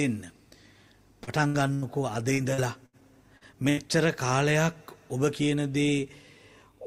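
At 1.23 to 1.30 s there is a short concealed packet loss: about 40 ms of the stream never reached the decoder in time. The receiver covered roughly 35 ms of that hole by extending the last sound, then blended back into the real signal. A brief smear or wobble is audible, and whatever fell in that slot does not come back.

Two bursts of packet loss follow, at 1.47 to 1.57 s and at 1.74 to 1.85 s. Each time about 80 ms went missing in a row, too long to be hidden as a single short patch. The decoder carried the last sound forward for some 70 to 80 ms while fading it down, so each burst is heard as a held, dimming tone or hiss. The sound then jumps ahead, with the stretch in between lost.

From 2.34 to 3.80 s the stream suffers repeated packet loss, producing a robotic sound. Seven separate gaps land within that span of about one and a half seconds, together about 280 ms missing, the longest near 80 ms, so roughly a fifth of the stretch is filler. 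Each hole is patched by extending what came before, and the next arrives soon after. The result is choppy, with pieces cut out throughout.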